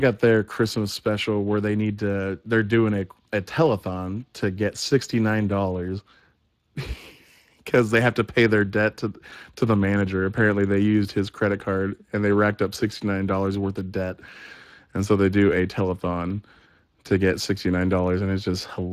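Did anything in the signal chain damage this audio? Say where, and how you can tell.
Yes, at the codec stage. Throughout the speech there is a plainly audible hoarse, noisy graininess and no content above 15.2 kHz. That points to Speex, whose CELP coding has too few bits for the excitation, which fits a rate near 22 kbps.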